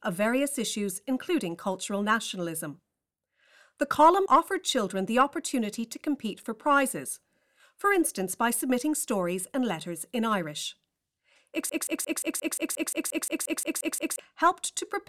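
Speech with a broken-record loop from 11.69 to 14.19 s: a 176 ms fragment repeats 14 times, showing as identical blocks on a spectrogram, likely from a stalled player or stream.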